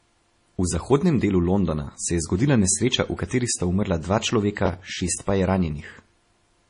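Throughout the speech the top end is dull, with nothing above 10.5 kHz and the grainy smear of heavy compression. This is likely low-bitrate audio saved at a high bitrate, pointing to a 32 kbit/s MP3 re-encoded at about 251 kbit/s, which kept the first encoding's losses.

From 4.66 to 5.18 s a gritty burst of crackle tears across the sound, made of short, hard-edged repeats of audio just heard. This is processor overload crackle. The processor missed a run of buffer deadlines, which fits buffers of around 10 ms with roughly ten missed.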